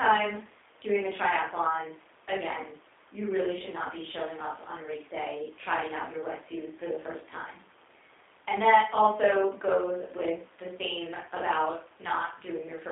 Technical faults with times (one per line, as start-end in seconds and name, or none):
0.00-12.91 G.729 codec